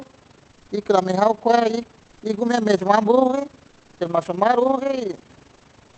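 Overlap-add ripple runs through the whole clip from 0 s. The speech was split into windowed frames and rejoined with overlaps that don't sum to a steady gain, so the level pulses about 11 dB at around 30 Hz, a rough, robotic flutter.

Comfort noise in place of the background appears at 0.51–0.67 s, 2.03–2.21 s (before "y gumi"), 3.67–3.99 s (before "tial mashom") and 5.53–5.63 s. In these pauses the real room background becomes a smooth, featureless hiss, about 1 to 2 dB quieter. The likely cause is Opus discontinuous transmission synthesizing filler noise while the sender stayed silent.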